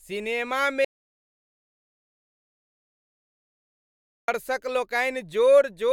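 From 0.85 to 4.28 s, an audio dropout to silence, likely lost input: the speech vanishes into silence with no room tone, unlike a pause.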